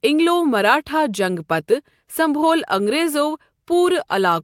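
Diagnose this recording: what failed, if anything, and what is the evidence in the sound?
No faults detected in this recording.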